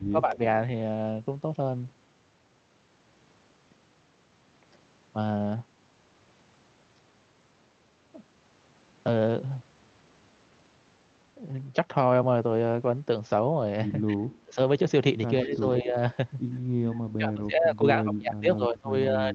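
From 0.09 to 0.4 s the speech drops by roughly 15 dB, likely speech suppressed in double talk: the echo canceller, unable to separate this talker from loudspeaker echo during overlap, attenuates both. The same dipping recurs at 14.09 to 14.58 s (around 25 dB), 15.43 to 15.95 s (around 10 dB), and from 17.17 s to the end (around 25 dB). Around 0.3 s and again around 15.55 s, a faint delayed copy, likely echo leak, arrives 133 ms and 155 ms after the source, about 35 dB and 30 dB below the speech, where residual loudspeaker pickup escaped cancellation.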